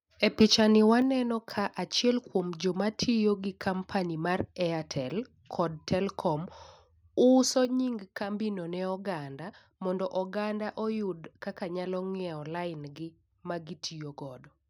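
Between 0.40 and 0.45 s the speech turns harsh and crackly, with peak tops flattened; this is likely microphone overload, with peaks about 2 dB past the converter's limit. At 1.02 s, then again at 7.65 s, voice and background suddenly drop by about 4 dB and about 5 dB, likely the microphone volume stepped down by the call software.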